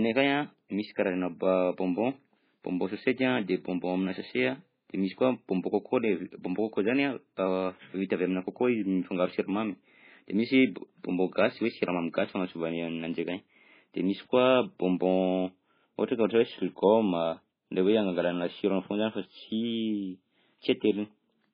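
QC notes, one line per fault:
throughout, MP3 compression: the encoder was likely starved of bits, which fits a bitrate near 16 kbps. It removed everything above 5 kHz and dropped weak frequency lines from frame to frame, so the speech sounds dull, muffled and heavily watery and swirling.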